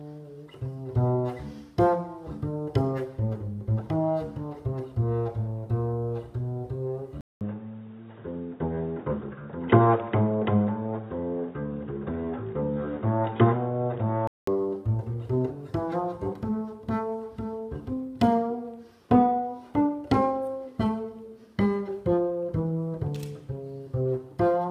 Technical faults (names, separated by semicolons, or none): input switched to a poorer device